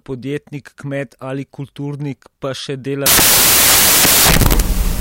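Speech, clean until 3.06 s, then samples built from the wrong bytes through to the end. The reader misassembles each sample's bytes. Fast-changing low bits land in the high positions. The result is loud, harsh broadband noise, close to white on the loud sounds.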